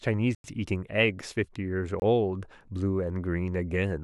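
Twice in this speech clip a block of digital silence was left in place of the audio, likely because the output was not filled in time. At 0.35 to 0.44 s, about 93 ms of audio drops to silence, which fits a 4096-sample block, and is heard as a short hole. At 2.00 to 2.02 s a 23 ms gap, consistent with a 1024-sample block, is also heard as a brief hole. Each cut has no fade.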